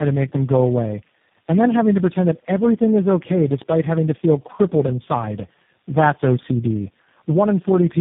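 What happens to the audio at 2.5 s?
At 2.5 s you're hearing tandem speech coding, which runs through the whole clip rather than being a one-off event. The speech sounds like it has been squeezed through several speech codecs in a row, decoded and re-encoded at each hop. Each coder builds on the last one's errors, so it ends up rough, muffled and warbly, with nothing above about 3.6 kHz, which fits a G.729A-style coder at the end of the chain.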